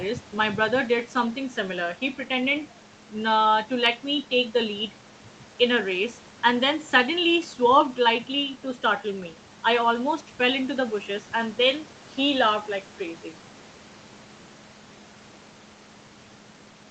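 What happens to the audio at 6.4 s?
Nothing goes wrong at 6.4 s: the speech carries on intact through that moment, with only the ordinary band limit of call microphone processing, which leaves nothing above 8 kHz.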